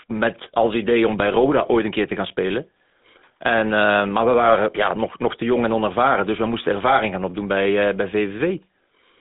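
From start to finish the speech carries the GSM full-rate codec's signature damage. The sound sits in a narrow line band of roughly 200 Hz to 3.7 kHz, with nothing above 3.8 kHz. Plain band-limiting would only sound muffled and thin. Here the voice is also buzzy and gravelly, because the codec rebuilds each vocal-tract frame from a sparse train of regular pulses. The roughness is plainly audible and fits a 13 kbps stream.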